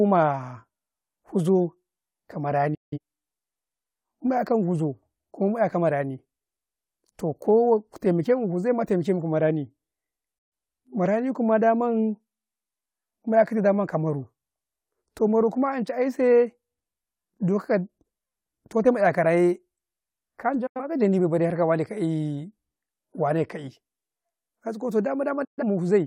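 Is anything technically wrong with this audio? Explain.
Yes. This speech has four short digital broadcast dropouts, at 2.74 to 2.98 s, 10.38 to 10.53 s, 20.66 to 20.81 s and 25.44 to 25.63 s. Each time the audio fades out within about 8 ms into a brief silence, then resumes. The receiver has muted over damaged or missing frames, so the speech in those gaps is gone. Each gap fits a loss of a few frames.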